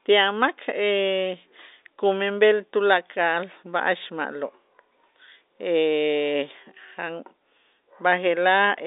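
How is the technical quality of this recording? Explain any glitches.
Nothing here counts as a glitch; the speech has the narrow, boxy sound of ordinary G.711 telephone coding, with nothing above about 3.8 kHz, and that is just what a phone line delivers.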